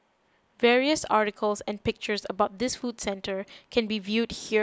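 No technical faults can be heard in this speech recording. It holds steady throughout, with no event that calls for comment.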